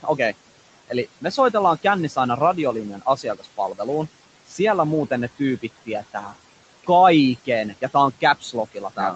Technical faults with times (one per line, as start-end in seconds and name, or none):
0.00-9.16 noise suppressor artifacts
0.88-2.17 speech cut by the noise suppressor
2.93-3.86 speech cut by the noise suppressor
4.47-4.59 speech cut by the noise suppressor
5.39-6.34 speech cut by the noise suppressor
7.45-9.16 speech cut by the noise suppressor